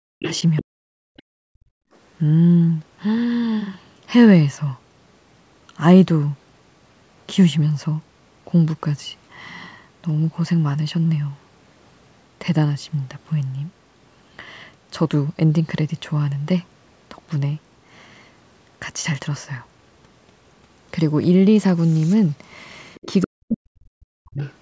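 At the very start, from 0.00 to 0.19 s, the room background is pulled down hard, by about 40 dB at its deepest, for roughly a fifth of a second. This is background gated by the echo canceller: with the loudspeaker active, the canceller clamps the microphone path. What sets it apart from double-talk suppression is that no talker is being cut. The ambient bed itself vanishes into near silence and then returns.

From 0.19 to 0.63 s a second voice sits underneath, about 10 dB below the main speech. This is the other side's voice leaking through, most likely echo from the loudspeaker playing the far side that the canceller failed to subtract from the microphone signal. It returns from 22.95 to 23.26 s at about 15 dB down, and briefly from 24.40 to 24.53 s at about 25 dB down. Unlike the gating, this adds sound rather than removing it. The intruding voice is quieter than the talker.

Overlapping that first leak, from 0.62 to 1.76 s, the main speech itself sinks, by as much as roughly 40 dB, for well over half a second in total. 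This is speech suppressed in double talk, likely because both ends spoke at once and the canceller, unable to tell the near talker from echo, attenuated everything. The same happens from 23.23 to 24.41 s, for about a second overall. Here it is the voice that drops, not the background. The whole signal, consistent with call microphone processing, carries nothing above 8 kHz.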